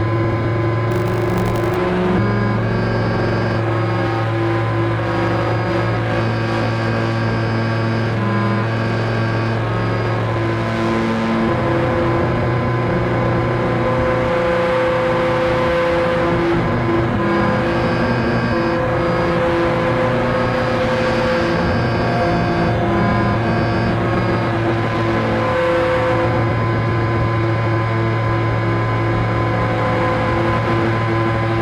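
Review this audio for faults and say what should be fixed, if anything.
Buffer tearing runs from 0.9 to 1.77 s, a rattling 50 Hz buzz present with the signal. The writer and the playback hardware have drifted, so a small slice of each 20 ms period, a few percent, holds audio from roughly 70 ms earlier, butted in with hard edges. To prevent it, keep the write pointer a safe margin ahead of the read pointer and resynchronise whenever their positions drift.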